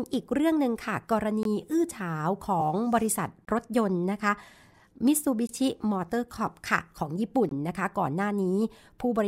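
Speech interrupted by a gap between chunks at 1.43–1.45 s, 3.45–3.47 s, 5.47–5.49 s and 7.49–7.51 s: 20 ms holes every 2.0 s, one at each chunk join. A waveform shows flat near-silent slots, and a spectrogram shows thin blank vertical stripes. At 2.60–2.62 s, compressed frames are skipped: around 50 ms of audio is missing, which fits about two 23.2 ms frames, so the speech jumps ahead. It appears as a discontinuity in the spectrogram's harmonics, with no silent slot.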